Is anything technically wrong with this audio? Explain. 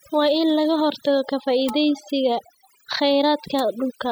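Yes. Throughout the speech there is overdone noise removal: a noise reducer set too aggressively has cut individual frequency bands whenever they resemble its noise estimate, taking soft parts of the voice too. The background drops and breaks up into twinkling specks. On a spectrogram, the gaps between phrases look almost empty, dotted with isolated bright points, and the voice's upper harmonics appear patchy and torn rather than continuous.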